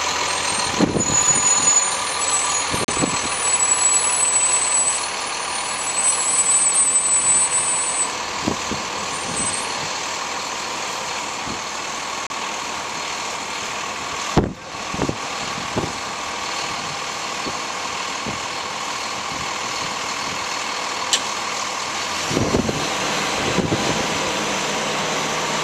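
At 2.85 s the audio drops to silence for 36 ms and then resumes, and the same happens again at 12.27 s for 34 ms. Both gaps are clean cuts rather than fades, and they are most likely a Bluetooth stall: radio interference delayed packets, the headphones' playback buffer emptied, and output paused until retransmitted data arrived. Gaps this short come across as brief dropouts in the flow.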